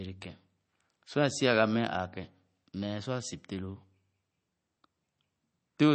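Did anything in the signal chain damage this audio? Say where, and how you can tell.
Yes. Throughout the speech the sound is watery and swirly, with nothing above about 8.3 kHz and smeared consonant attacks. This points to the codec stage, likely MP3 compression at a low bitrate near 32 kbps, where the encoder drops the treble and weak frequency lines flicker between frames.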